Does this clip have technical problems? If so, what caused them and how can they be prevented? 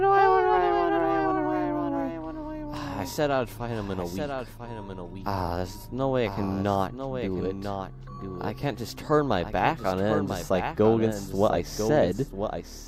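Yes, there's a doubled audio track running throughout: a second full-band copy trails about a second behind, a few dB quieter, with no decay or room colour. It's likely the audio being captured twice through a slower path. Prevent it by routing only one source.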